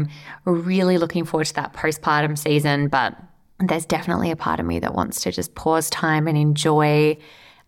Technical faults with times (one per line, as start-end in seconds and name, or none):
5.93-7.67 Wi-Fi interference